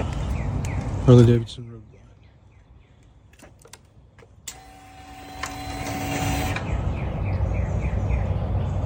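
A rapid ticking zipper noise rides on the sound from 1.24 to 1.64 s as the level falls by roughly 25 dB. The gain was lowered in unsmoothed 2 dB steps, about thirty a second, and each jump leaves its own small click.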